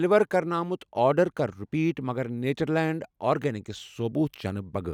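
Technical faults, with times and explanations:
No technical faults detected.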